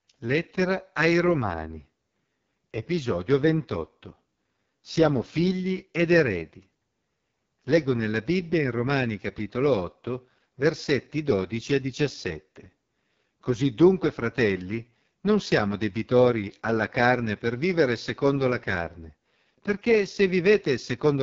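The whole clip carries heavy AMR wideband (HD Voice) codec damage, which fits its lowest 6.6 kbit/s mode. Speech sounds rough and raspy. Nothing remains above about 7.4 kHz.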